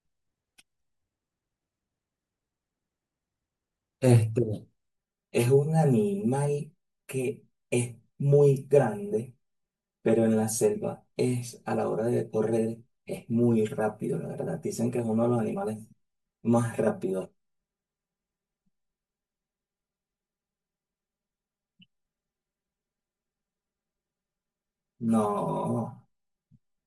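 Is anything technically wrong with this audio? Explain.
Yes. Channel delay (comb filtering) from 4.89 s onward: one channel lags roughly 5 ms, so the mono sum cuts evenly spaced notches from about 100 Hz, making the speech sound hollow.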